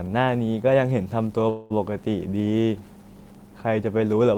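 At 1.49 s the speech stalls for about 0.23 s, until 1.72 s, in a call audio freeze. The last sound is stretched into a fading buzzy hiss that fills roughly 208 ms, and the speech then resumes exactly where it stopped, now running about 208 ms late. The likely cause is packets held up in transit, leaving the jitter buffer empty. A spectrogram shows smeared, repeating bands that thin out, and the waveform shows a decaying, patterned stretch with no true silence.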